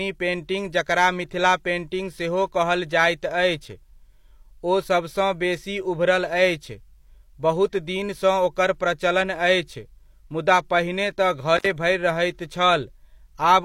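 At 11.57–11.66 s, just before "भरि रहैत", an intermittent contact opens the line for about 59 ms: the speech drops out between brief crackles.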